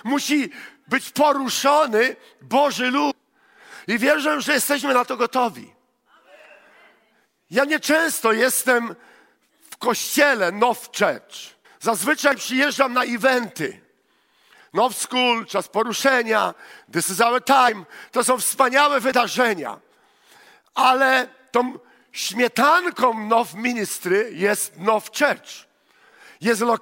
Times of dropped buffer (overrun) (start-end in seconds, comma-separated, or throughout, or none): 9.72, 12.32